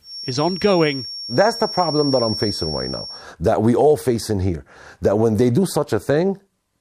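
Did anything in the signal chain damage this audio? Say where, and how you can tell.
Yes. A thin, steady feedback whistle near 5.5 kHz sits behind the speech from 0 to 3.29 s, roughly 10 dB under it, swelling and fading slowly and stopping just before "that we all facing". Its likely cause is a loudspeaker-to-microphone loop held right at the edge of feedback, in the analogue stage.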